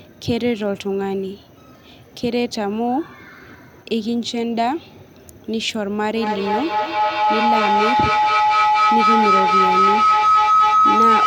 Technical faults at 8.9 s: feedback howl

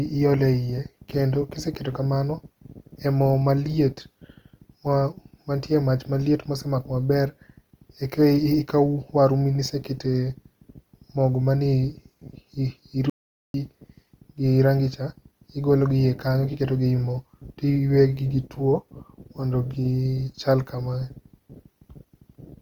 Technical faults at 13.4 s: Opus compression; audio dropout to silence

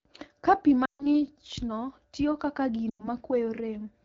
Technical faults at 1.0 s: lost AMR speech frames

